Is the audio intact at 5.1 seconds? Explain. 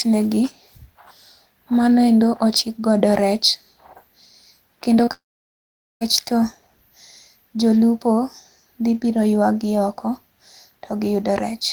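No. From 5.05 to 5.09 s there is short concealed packet loss: about 20 ms of audio missed the decoder, which extended the previous sound and blended back in, leaving a brief smear or wobble. Then, from 5.13 to 6.03 s, a long network dropout likely cut the stream for about 880 ms. The receiver carries the last sound on briefly as a fading buzz or hiss, then roughly 0.8 s of silence follows before the audio resumes with that stretch missing.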